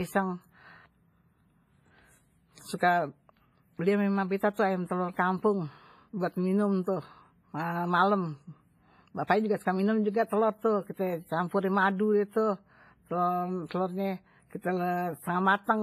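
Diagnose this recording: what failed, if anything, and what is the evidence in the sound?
WMA compression throughout, a codec-stage fault: washy, ringing speech, hiss breathing with it, nothing above 15.3 kHz; likely a low-bitrate encode, around 24 kbps, smearing quantisation noise.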